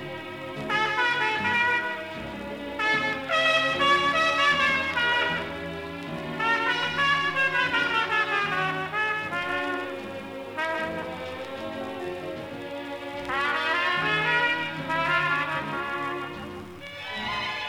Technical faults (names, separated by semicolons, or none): doubled audio track